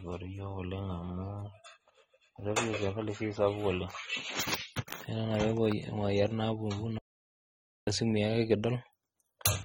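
AAC compression runs through the whole of this speech recording, with its damage plainly audible: the sound is dull and smeared, sibilants take on a fizzy, warbling texture, and nothing survives above 18.9 kHz. The likely cause is low-bitrate AAC-LC coding, consistent with about 24 kbps, where the encoder quantises its frequency lines coarsely against a hearing model and leaves gaps or noise-filled bands across the spectrum. A playback stall then cuts the speech off at 6.98 s, leaving about 0.89 s of silence before it resumes at 7.87 s. The output simply stops mid-flow and picks up again afterwards, which points to the player having likely run out of buffered data or had its audio thread blocked until it could recover and continue feeding samples.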